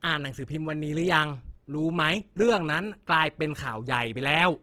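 From start to finish the speech has a grainy, rough texture. The sound comes across as noisy rather than clean, though the top end stays open and the sound isn't muffled. That points to likely Opus compression running in its CELT music mode at a low rate, around 16 kbps by the sound of it. Bands short of bits get filled with folded or noise content, so there's less hollow swirl than MP3 would give, just plainly audible roughness.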